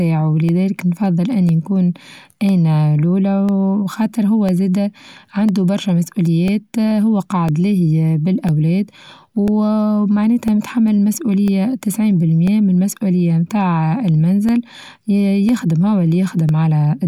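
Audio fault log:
0.49–16.49 s, periodic USB or driver dropouts: around fifteen tiny gaps, each roughly a millisecond of silence, recur exactly once per second as a recurring bus or driver stall interrupts the stream. Their strict one-second spacing, ticking against the speech, distinguishes them from random clicks.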